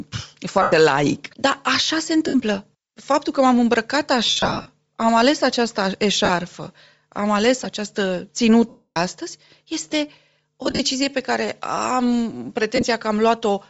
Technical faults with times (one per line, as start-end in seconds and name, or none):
0.00-13.69 Bluetooth LC3 compression
0.62-0.72 lost LE Audio frames
2.28-2.34 lost LE Audio frames
4.26-4.68 lost LE Audio frames
6.25-6.30 lost LE Audio frames
8.69-8.97 lost LE Audio frames
10.64-10.80 lost LE Audio frames
12.76-12.83 lost LE Audio frames